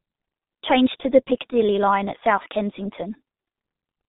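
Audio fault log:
Throughout, G.723.1 codec: the speech went through a low-rate telephony coder, likely around 6.3 kbit/s with 30 ms frames, which discards everything above 4 kHz and refreshes its voice model slowly, so the damage is heavy: muffled, hoarse tone and smeared consonants.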